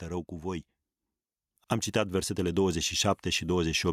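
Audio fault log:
2.35–3.93 s, automatic gain rising: the automatic gain control judged the input too quiet and raised its gain step by step, so the speech and the background noise swell together by about 5 dB until the clip ends. Someone moving closer to the microphone would make the voice louder without lifting the room noise, unlike this slow climb that gets louder and noisier together.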